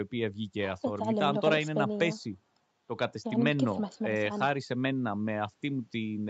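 No technical faults can be heard in the speech; it carries the band-limited sound of a call connection, with nothing above about 8 kHz and the usual coding texture of an Opus stream at around 48 kbps.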